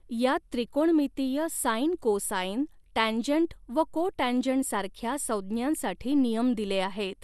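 From start to finish the speech carries generation loss, likely from about ten successive MP2 passes, which fits a 128 kbit/s chain. Content stops near 12.6 kHz, yet a single pass wouldn't explain how swirly, hollow and smeared the consonant attacks sound.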